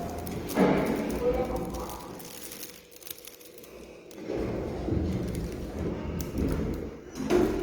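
Throughout the clip, tonal parts of the sound turn grainy, rough and noisy, with bands filled in rather than left hollow, though the top still reaches about 20.2 kHz. This is likely Opus compression in its CELT music mode, at a rate that suggests about 24 kbps.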